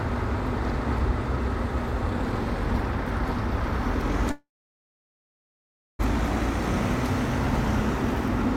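Packets were likely held up and the jitter buffer ran dry: a call audio freeze from 4.31 to 6.01 s, a brief fading buzz then 1.52 s of silence, nothing lost.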